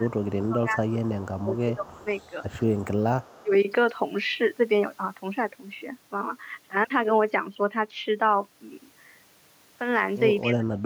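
A speech recording with two related echo-control problems. Speech is suppressed in double talk from 0.00 to 2.07 s (about 1.5 s affected), 2.87 to 3.52 s (about 0.3 s) and 10.43 s to the end. The level drops by roughly 20 dB in the first two and by roughly 35 dB in the last, likely because an echo canceller could not separate the talker from far-end audio and ducked both. On a waveform these show as sudden troughs in the envelope, and on a spectrogram as hollowed-out bands where the upper harmonics thin or vanish. Echo leak appears at 0.20 to 0.27 s, 1.01 to 2.84 s and 3.22 to 3.43 s as a faint copy of the speech trailing it by 197 ms at about 30 dB below. Residual loudspeaker pickup was likely not fully cancelled and was sent back. On a spectrogram it looks like a weak, smeared duplicate of the harmonic pattern shifted right by about 0.2 s, too quiet to change the waveform envelope much.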